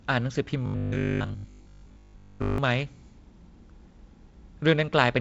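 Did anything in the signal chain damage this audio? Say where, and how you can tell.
Yes. From 0.66 to 2.58 s the speech turns into a rigid, metallic buzz at 50 Hz: robotic sound from repeated short buffers, likely a driver or buffer stage starved of new audio. A 50 Hz buzz means a 20 ms segment is being looped, which imposes that fixed pitch. Most of the audio in that stretch, roughly 70%, is replayed rather than new, so the speech only loosely tracks through it. The G.722 band limit near 7 kHz is unaffected.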